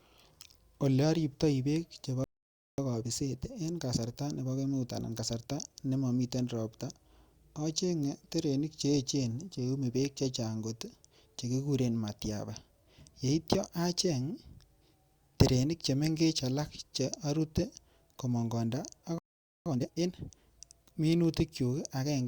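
The player likely ran dry of data or had its thread blocked, causing a playback stall: the speech cuts to silence from 2.24 to 2.78 s (about 0.54 s), and again from 19.18 to 19.66 s (about 0.47 s), before resuming.

After each gap the player trims its backlog with time-compressed catch-up, splicing out short pieces and cross-fading the joins. From 2.78 to 5.78 s speech runs at 1.1 times speed, and from 19.66 to 20.12 s at double speed, hurried at normal pitch.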